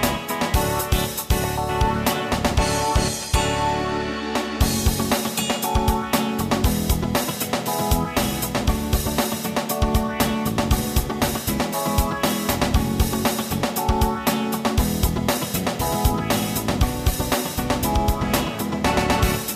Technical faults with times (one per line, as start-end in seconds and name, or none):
none